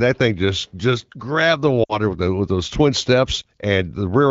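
At 1.83 to 1.99 s, after "just just grabbed the", there are lost AMR speech frames. Roughly 60 ms of frames failed, so the wideband decoder repeated old settings and faded out. The sound drops to near silence. A single lost frame follows at 3.41 to 3.45 s.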